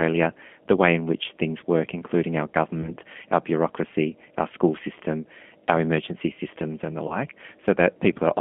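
Throughout, the speech carries plainly audible G.729 codec damage. The band stops near 3.4 kHz and thins below 200 Hz, and the rough, slightly synthetic texture fits an 8 kbit/s rate. That texture sets it apart from simple band-limiting, which would sound clean and merely muffled.

At 2.82 to 2.92 s and again at 7.08 to 7.17 s, VoIP packet loss concealed by the speech codec is heard. Each gap fits a single 20 ms lost packet. The decoder extrapolates from its last pitch and filter with falling gain, and the weakened sound lingers about 0.1 s, unlike the hard silence of a dropout.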